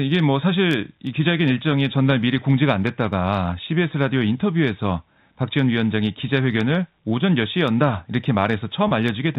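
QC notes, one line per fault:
8.88–8.91 s, packet loss with pitch repetition: about 30 ms of the speech went missing, likely a single lost packet, and the receiver bridged it by looping the last pitch period, so the sound briefly holds with a slightly buzzy, frozen quality inside the G.711 telephone band.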